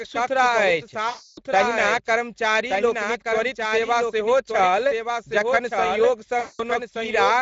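The speech is carried over a Speex codec link at around 17 kbps. The result is a plainly audible Speex codec sound: the voice is hoarse and noisy, and the upper band is only a hiss-like fill. A doubled audio track runs the whole way through, most likely from a second capture path or an edit holding two copies out of step. A full-band copy of the speech trails about a second behind the original at about 5 dB lower, with no reverberant tail or room colour, so it sounds like a dry, overlapping repeat rather than an echo. There are also two stretches of VoIP packet loss concealed by the speech codec. The first comes right after "बहुत साफ सुथरा अछि", from 1.09 to 1.41 s, and the second runs from 6.39 to 6.63 s. In each one the decoder covered roughly 280 ms and then 200 ms of missing packets by extending its last pitch and filter while turning the gain down frame by frame. You hear the voice stretched into a fading sound, and it stays weak and distorted for a short while after the packets return.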